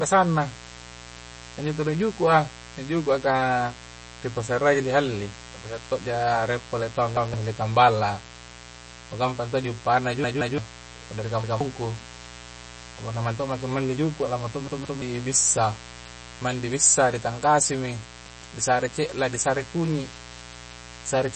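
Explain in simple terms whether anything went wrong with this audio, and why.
Three things went wrong with this speech recording.

The first is mains buzz, a steady, raspy hum built on the 60 Hz of the electrical supply, running under the speech for the whole clip. Sharp electrical spikes from a dimmer, a rectifier or an unshielded cable leak in twice per mains cycle, which adds overtones high up the range. That is why it sounds buzzy and gritty rather than like a smooth, low hum.

The sound is also plainly watery and swirly, with smeared consonants and nothing at all above about 8.4 kHz, so it lacks crispness. The likely cause is heavy MP3 compression. Short of data, the encoder drops quieter details that flicker in and out, and it cuts the treble at a fixed point. This differs from a plain muffled microphone because of the shifting, bubbly texture.

Finally, there is a repeated buffer at five moments. 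Each time, a fragment about 0.17 s long plays again with an abrupt join, making a quick stutter. It happens once at 7.17 s (just after "rie' pole tauang"), 11.44 s and 18.26 s (just after "di tangkasimi"), and twice in a row at 10.24 s and 14.68 s. Fresh audio arrived late, so the player reused the last chunk. Unlike a dropout, you hear a repeat rather than a silent gap.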